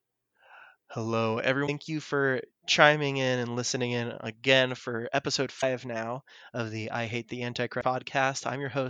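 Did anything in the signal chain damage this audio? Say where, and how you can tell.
Yes. Damaged data in the compressed stream, at the codec stage. Brief disturbances sit at 1.63–1.69 s just before "you for chiming in", 5.58–5.64 s between "in again for episode" and "now of the I", and 7.80–7.83 s. Corrupt frames throw the decoder out of sync, so it has to search for the next frame header before decoding resumes.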